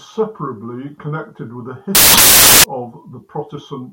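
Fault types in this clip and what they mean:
Samples built from the wrong bytes: from 1.95 to 2.64 s the bytes of each sample are paired wrongly, so the fast-changing low bits dominate and the speech turns into loud, harsh broadband noise. A spectrogram shows flat broadband energy; the waveform becomes a dense block.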